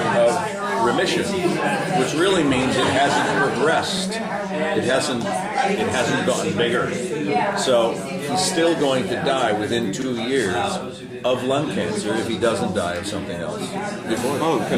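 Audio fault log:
3.97–4.02 s and 10.02–10.06 s, overlapping chunks: each 6-second chunk starts 44 ms early, so that slice plays twice as a stutter; the waveform shows a repeated segment and step at each seam.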